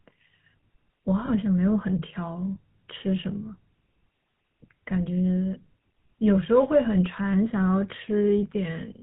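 The whole speech clip carries the GSM full-rate codec sound. Nothing above 4 kHz gets through. The voice is buzzy and gravelly, because the codec rebuilds it from a vocal-tract model fed by sparse, regular pulses. The damage is plainly audible and fits a 13 kbps coder.

From 1.26 to 1.29 s there are lost GSM frames. The decoder fills the gap by reusing the last good frame. This gives a brief, rough metallic ring. The length fits a single missing 20 ms frame.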